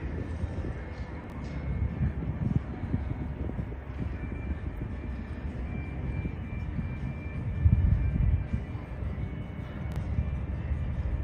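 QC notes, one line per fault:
1.24–1.32 s, chunks out of order: a 20 ms chunk plays three chunks late, so about 80 ms of audio is shuffled and jumbled, with three hard joins. Unlike a dropout or repeat, nothing is missing or doubled.
9.92–9.96 s, chunks out of order: a single 20 ms chunk plays one slot late, swapping places with its neighbour. This gives a brief 40 ms scramble with hard joins. No gap or stutter follows, which sets it apart from packet loss.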